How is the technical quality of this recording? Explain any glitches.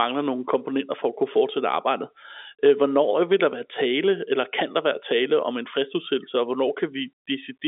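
No glitches turn up anywhere here; what you're hearing is just the narrow band of a G.711 mu-law telephone line, with the speech sitting between 250 Hz and 3.6 kHz and nothing reaching above 3.7 kHz.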